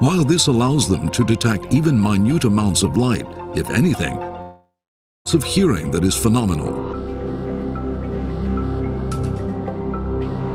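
From 4.41 to 5.27 s comes a long network dropout, likely from packets ceasing to arrive. The last sound smears into a fading buzz, then 0.56 s of silence, and audio resumes with 0.84 s lost. A spectrogram shows a blurred, decaying band, then a blank gap.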